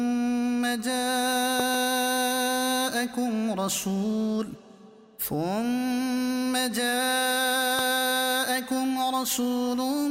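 Loud pops hit twice between 1.60 and 1.76 s and once at 7.79 to 7.81 s, about 15 dB above the sound and likely voltage pulses; unlike a dropout, the sound carries on underneath.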